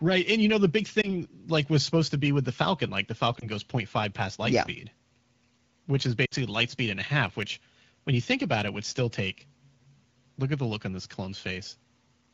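Lost AMR speech frames: corrupted frames were patched with fading repeats of earlier speech, causing warbling dips at 1.01–1.16 s and 3.40–3.47 s, and a three-frame loss at 6.25–6.34 s.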